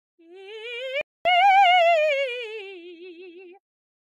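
A playback stall runs from 1.01 to 1.25 s in this music: the sound cuts out abruptly mid-flow and the output stays silent for about 240 ms before the music picks up again. The gap is long enough to register as a clear interruption rather than a click. The likely cause is that the player ran short of data or its audio thread was held up, leaving nothing to send to the output until it recovered.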